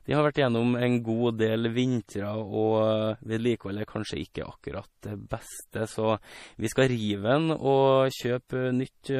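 Speech, and the whole thing carries plainly audible MP3 compression: nothing above about 15.1 kHz, a watery, swirly sheen on the sibilants, and smeared consonant attacks, which fits a low bitrate of around 40 kbps that likely starved the encoder and made it drop weak spectral detail.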